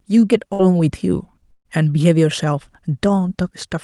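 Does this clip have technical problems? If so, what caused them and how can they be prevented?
Yes. A burst of packet loss occurred twice, at 0.53 to 0.61 s and 1.51 to 1.67 s. Consecutive packets of the speech were lost or arrived too late, so the receiver stretched and faded the last sound for about 55 ms and 140 ms. The longer gap ends in 50 ms of silence, and each resumes with that speech missing. Enabling Opus forward error correction, an adaptive jitter buffer and a less congested network link would prevent this.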